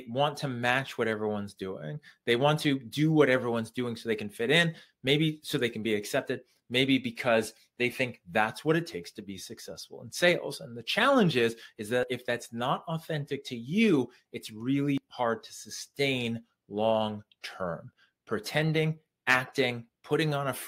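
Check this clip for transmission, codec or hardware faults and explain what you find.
Two abrupt skips stand out, at 12.03 s and 14.98 s, each with the sound jumping forward by roughly 40 ms. This points, likely, to a dropped buffer (overrun), where samples were overwritten before being read and the surrounding audio spliced together without any gap. The waveform shows a sudden discontinuity at each point; the spectrogram shows a thin vertical broadband line.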